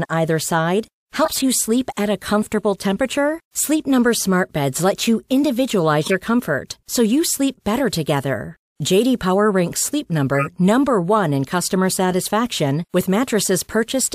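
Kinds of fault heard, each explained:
Corrupt frame decoded: at 1.24 to 1.42 s (after "either side", before "you sleep"), 6.03 to 6.12 s (just before "comfort so you sleep") and 10.35 to 10.47 s, the speech briefly turns into chirpy, noisy bursts. Damaged bits in compressed frames were decoded anyway, so misread gains and codes put energy at wrong frequencies for a few frames each time. The bursts peak around -10 dBFS, with the last one louder.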